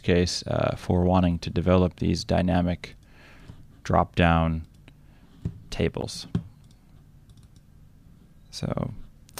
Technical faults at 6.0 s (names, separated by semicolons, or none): damaged data in a compressed stream